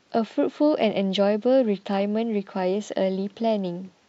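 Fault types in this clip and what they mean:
No technical faults detected.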